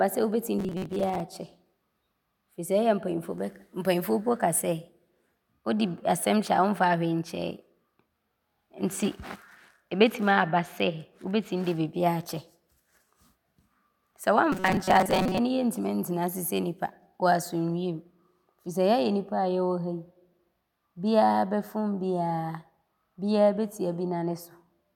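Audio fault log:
0.58–1.20 s and 14.52–15.38 s, robotic sound from repeated short buffers: audio likely arrived too seldom, so playback filled the gaps by looping a fragment of about 5.3 ms while the real signal was skipped. Roughly half of the first stretch, just after "sɛ wobɛtim", and most of the second were filled this way. Each loop imposes a fixed 188 Hz buzz, so the speech turns rigid and metallic while loosely tracking the original.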